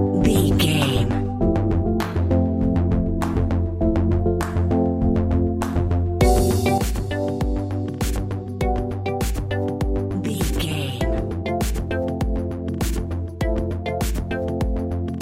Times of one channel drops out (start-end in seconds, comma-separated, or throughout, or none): 6.78-15.21